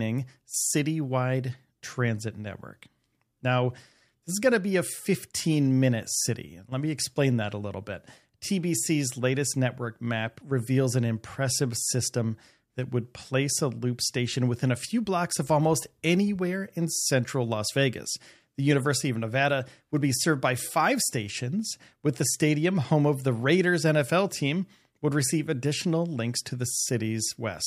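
No technical faults can be heard anywhere in the recording, and the signal carries through without any dropout, glitch, distortion or other defect.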